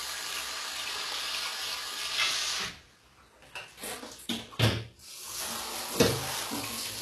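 From start to finish, the treble sounds synthetic: bright but gritty and metallic, with nothing above about 12.3 kHz. That points to HE-AAC compression at a very low bitrate, likely around 16 kbps, where the upper bands are copied from lower ones rather than coded.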